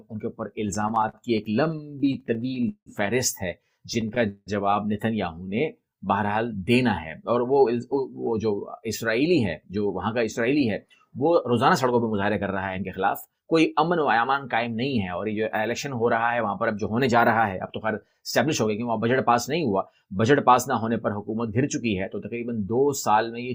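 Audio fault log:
0.67–2.89 s and 3.94–4.49 s, repeated stalls (stutter): packets kept turning up late, so the jitter buffer ran dry again and again and the receiver stretched out the last bit of sound to cover. The first stretch has 25 gaps totalling 440 ms, the second 5 gaps totalling 222 ms, up to about 180 ms long, so nothing's lost but it drags and stutters.
5.35–5.98 s, jitter buffer slow-down: the buffer needed more in reserve, so the receiver repeated single pitch periods over and over, adding 86 ms. That runs the sound at about 88% speed with the pitch unchanged, so things come out drawn out.
7.80–8.53 s and 9.21–15.18 s, jitter buffer speed-up: here the buffer held more than it wanted, so the receiver snipped out short pitch-period pieces, about 70 ms in the first stretch and around 400 ms in the second. That pushes playback to 108% and 106% at the same pitch, so it sounds a touch hurried.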